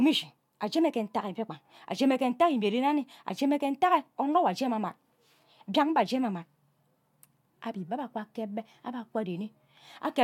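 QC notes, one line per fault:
No faults heard anywhere in this speech recording.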